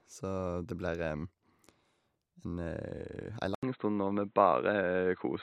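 Speech runs at full bandwidth until 3.55 s, when an 80 ms silence gives way to a dull, boxy sound with nothing above 4 kHz, a level shift of roughly 5 dB and a new noise floor roughly 40 dB down. It likely comes from the input switching to a poorer device. A spectrogram shows a gap, then the upper band cut off flat through 5.42 s.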